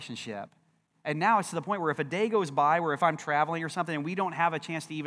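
A short speech recording with no technical faults to report: the signal runs continuously without interruption, and its level, timing and tonal balance hold steady throughout.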